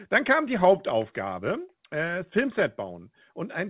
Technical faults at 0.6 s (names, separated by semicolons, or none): none